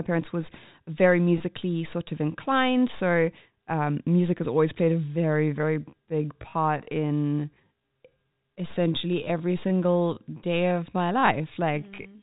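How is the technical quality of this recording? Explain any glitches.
The recording has two glitches, heard over a telephone-band signal that stops at 4 kHz, consistent with G.711 coding.

At 1.38 to 1.40 s, a packet loss with pitch repetition drops about 20 ms of audio. The receiver bridges the gap by repeating the last pitch period, so it sounds like a brief held, buzzy hum. A clean dropout would leave a click or silence instead.

From 4.88 s to the end, a time-stretched section plays at about 0.71 times normal speed. It is most likely software stretching that keeps the pitch by repeating short pieces. The pace slows abruptly and the speech drags, but the pitch never drops as it would with a plain slowed-down playback.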